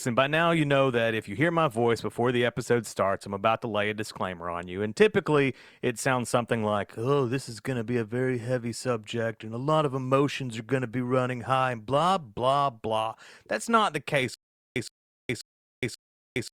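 This is a speech clip with a stutter with silent gaps from 14.34 s to the end. Right after "not the", a 117 ms burst of sound plays, then drops into digital silence for about 417 ms. The same burst returns four times, once every 534 ms. The audio that belonged in those gaps never plays. The likely cause is a stalled player or stream that replays its last fragment on each retry and then runs empty.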